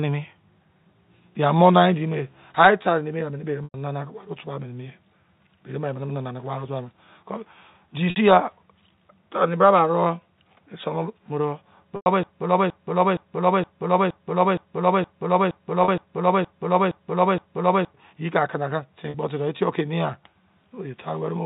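Speech over a narrowband telephone channel, consistent with G.711 coding, carries two kinds of fault. Packet loss with pitch repetition hits at 3.64 s (100 ms), 8.10 s (60 ms), 11.96 s (100 ms), 15.84 s (40 ms) and 19.10 s (40 ms). At each gap the last pitch period is repeated and faded, so the voice briefly holds a buzzy, frozen tone before speech resumes. The lengths fit runs of two to five 20 ms packets going missing. From 12.23 s to 17.94 s a broken-record loop takes over: one piece about 0.47 s long repeats exactly, back to back, roughly twelve times, and the speech that belonged there never plays. The likely cause is a stalled player or stream resending its last fragment. The two faults differ in length and content. A packet-loss patch lasts a tenth of a second at most and stretches a single pitch cycle into a decaying buzz. The loop runs for several seconds and replays a whole recognisable fragment identically each time.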